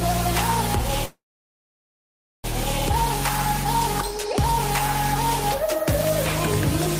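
From 1.05 to 2.46 s there's a call audio freeze. The last sound smears into a brief fading buzz, then goes silent for 1.27 s before resuming exactly where it stopped. Packets were likely delayed, draining the jitter buffer, so everything afterwards arrives 1.39 s late with nothing lost.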